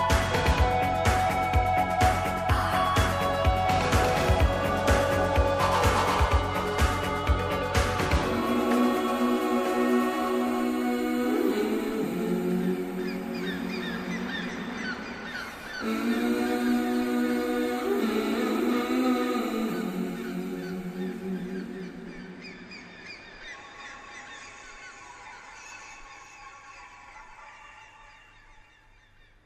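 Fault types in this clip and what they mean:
No fault types can be heard in this clip.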